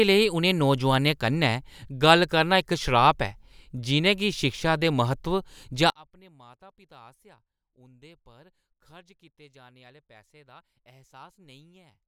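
From 5.9 s to the end, the speech collapses to a faint remnant, roughly 29 dB quieter, with the centred voice and its low end nearly gone. The likely cause is one channel inverted: one stereo side has flipped polarity, so when the two sides are summed to mono the shared content cancels, leaving only the small differences between channels as a weak trace.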